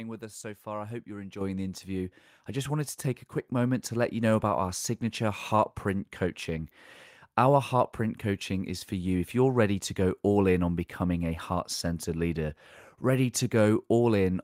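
At 1.41 s, after "far I hope you're", and 2.43 s, after "the interview", microphone volume stepped up by about 7 dB, then 4 dB, lifting voice and background together; waveform envelope jumps abruptly.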